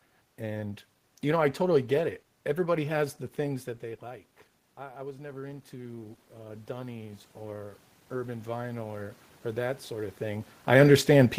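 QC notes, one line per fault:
3.45–10.52 s, automatic gain rising: just after "has the" the input falls about 15 dB as the talker moves off the microphone. The gain control then climbs about 12 dB over some seven seconds, so the room noise swells along with the voice.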